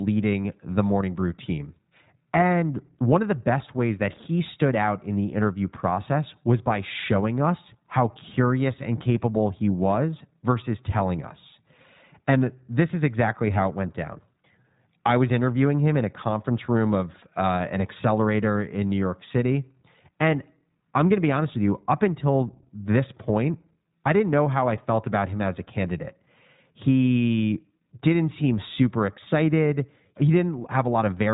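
Speech coded with the iLBC codec throughout, and the coding damage is plainly audible. The band stops at about 3.8 kHz, leaving the sound narrowband and dull with no sibilant air. Because each short frame's excitation is coded independently of the previous one, the voice has a slightly rough, synthetic grain. The texture and the frame rhythm point to iLBC's 20 ms mode at around 15.2 kbps, a typical narrowband VoIP setting.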